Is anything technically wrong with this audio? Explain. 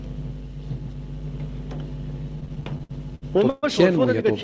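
Yes. Repeated stalls (stutter) run from 2.36 to 3.65 s: the jitter buffer kept running dry as packets arrived late, so the receiver stretched the last sound through thirteen short gaps, the longest 129 ms. About 346 ms, roughly a quarter of that stretch, is filled in this way, and nothing is lost. The audio drags and stutters in place. The call path's G.722 coding at 64 kbps stops everything above 8 kHz.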